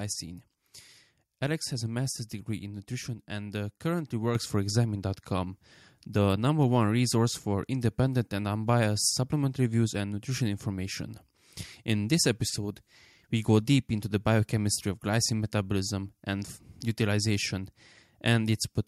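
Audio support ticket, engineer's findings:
Microphone volume stepped up at 4.35 s: speech and background jump about 6 dB together. Capture-side auto gain raised device input level in one step.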